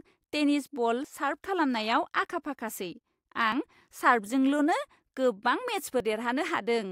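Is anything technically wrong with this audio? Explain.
Yes. At 1.04, 3.52 and 6.0 s, about 20 ms of speech vanishes, spliced without silence. This is likely audio missing between chunks, lost at 2.5-second chunk boundaries.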